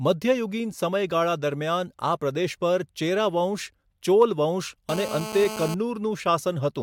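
From 4.89 to 5.74 s a GSM phone buzz sits under the speech: a nearby 2G handset on a call pulses at 217 Hz, and the audio circuit rectifies those bursts into a steady, raspy buzz about 9 dB below the signal, drawn on a spectrogram as evenly spaced horizontal harmonic lines.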